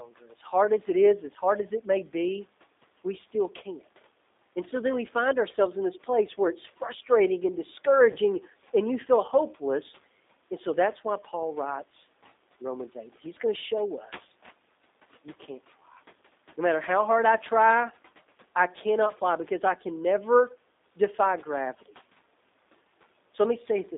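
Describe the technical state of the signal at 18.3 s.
At 18.3 s the speech carries G.729 codec damage, present throughout: rebuilt from a vocal-tract filter and sparse pulses, which fits an 8 kbit/s codec, it sounds rough and synthetic. A spectrogram shows the band ending near 3.7 kHz and an empty floor below 250 Hz.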